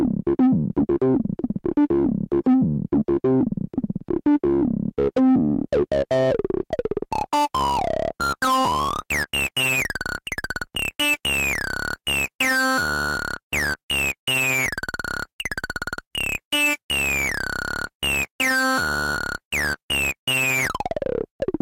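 No technical faults can be heard anywhere in this recording of sounds. Nothing interrupts or alters the audio at any point.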